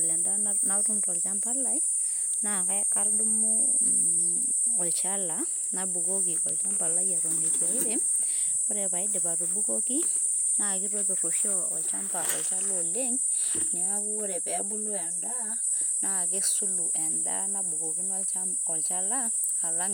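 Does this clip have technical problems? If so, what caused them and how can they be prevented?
Yes. From 14.01 to 15.64 s, one channel arrives roughly 10 ms late before the two are summed to mono. This channel delay (comb filtering) makes the speech hollow and phasey, with fixed notches starting near 50 Hz and repeating roughly every 100 Hz. Keeping both channels time-aligned and checking the mono sum prevents it.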